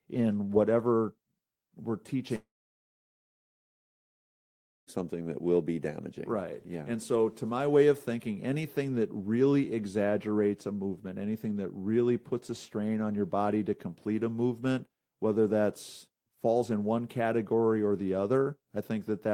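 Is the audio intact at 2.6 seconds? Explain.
No. After "in whatever we're" the sound fades into a brief buzz, then silence from 2.35 to 4.90 s, resuming at "that will be damaging" with about 2.5 s lost, likely a long network dropout.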